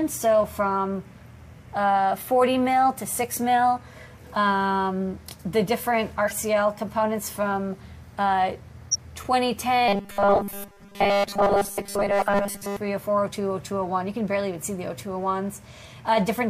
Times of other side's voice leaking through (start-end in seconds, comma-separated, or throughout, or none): none